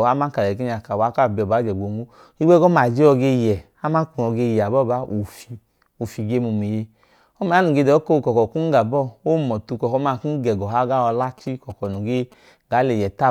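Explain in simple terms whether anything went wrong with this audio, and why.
Near the end of the speech, from about 11.23 to 12.34 seconds, a galloping dit-dit-dit of short buzzes cuts in. This is interference from GSM signalling bursts. A 2G mobile phone close to the recording gear was sending short groups of radio pulses to the network. The audio circuit picked up those pulses and turned them into sound. The buzz repeats about 217 times a second. It sits fairly quietly, well below the speech.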